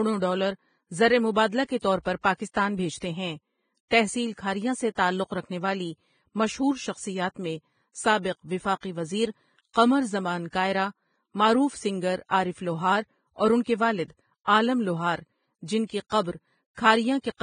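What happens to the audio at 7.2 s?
At 7.2 s the speech carries the same damage heard across the whole clip: nothing sounds above 9.7 kHz, and the remaining treble is hissy and grainy, with sibilants smeared into noise and consonant onsets blurred. This is likely Vorbis compression at a heavy setting, consistent with a rate around 20 kbps. The coder keeps a smooth spectral envelope but quantises the upper detail so coarsely that it becomes noise of similar energy. A plain low-pass filter would dull the top cleanly rather than turn it to grit.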